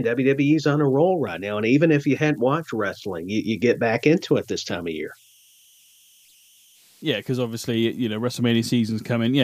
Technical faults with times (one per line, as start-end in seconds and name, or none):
0.00-9.44 converter idle tones